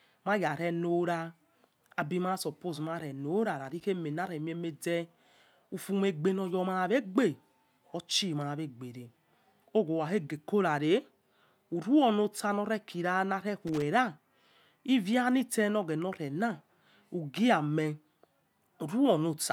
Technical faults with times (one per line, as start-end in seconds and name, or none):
3.65-3.83 loose connector crackle
13.67-13.82 loose connector crackle